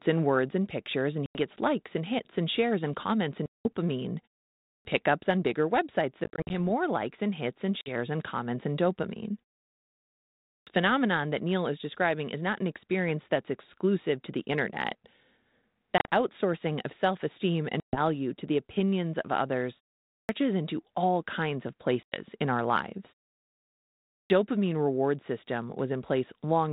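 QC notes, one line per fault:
3.46–3.67 s and 17.8–18.0 s, packet loss on an ADPCM call: hard-edged silent holes of 190 ms and 130 ms, pointing to roughly twenty and fifteen lost packets. The waveform shows flat gaps. Afterward the decoder's predictor and step size no longer match the sender's, so the speech resumes slightly distorted. On the spectrogram the smearing settles within tens of milliseconds. The G.726 coding at 32 kbit/s does only light damage.
4.72, 10.54, 20.16 and 24.17 s, clipped start after a pause: after silences of 0.53, 1.18, 0.44 and 1.12 s, about 130 ms at the start of each phrase is swallowed while the output device wakes. The waveform jumps from flat straight to speech level with no onset ramp. The spectrogram shows phrases beginning abruptly, missing their first sounds.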